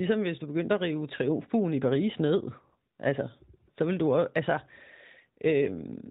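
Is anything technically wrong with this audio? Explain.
No, nothing here is faulty; the speech arrives through the AMR narrowband mobile codec at 12.2 kbps, so it is band-limited to 4 kHz with only light coding texture, which is how that link normally sounds.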